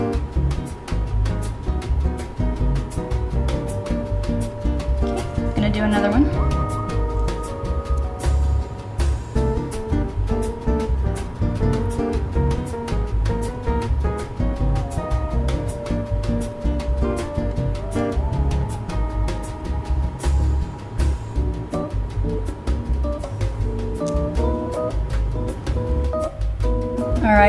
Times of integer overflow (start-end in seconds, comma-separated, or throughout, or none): none